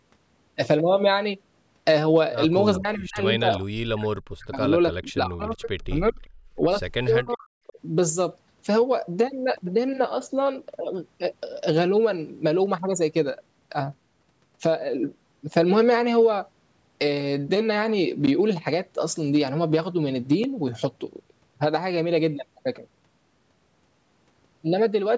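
From 2.76 to 6.17 s the speech repeatedly sinks and breaks up, at 2.76–3.23, 3.41–4.6, 4.96–5.7 and 5.88–6.17 s, and again at 7.21–7.78 s. Dips reach about 25 to 40 dB. This is speech suppressed in double talk, likely from an echo canceller mistaking the talker for loudspeaker echo while the far side also spoke. A spectrogram shows the speech energy collapsing into dark gaps and thinned patches.

At 6.22–6.27 s and 7.06–7.34 s a faint delayed copy of the sound returns, some 360 to 375 ms late and about 30 to 40 dB down. This is echo leak, likely residue an echo canceller failed to remove. It shows as weak, smeared repeats of earlier harmonic patterns.

At 6.45–6.55 s the room background drops by about 13 dB for roughly 100 ms. The canceller has gated the microphone while the loudspeaker played. The noise floor briefly darkens on a spectrogram, then recovers.

At 18.27 s and 20.44 s the waveform cuts abruptly to silence and back. 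These are blocks of digital silence, 11.6 ms and 5.8 ms long. The longer one fits a 512-sample buffer that wasn't filled in time. Each is heard as a clicky tick and appears as a hard-edged gap with vertical broadband lines at its edges.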